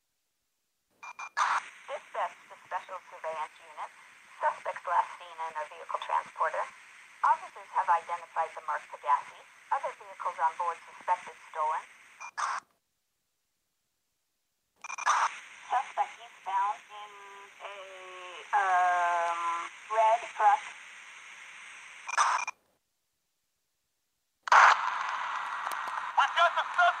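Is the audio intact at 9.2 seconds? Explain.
Yes, the audio is intact at 9.2 seconds, with no dropout, click, distortion or other fault to be heard at that moment.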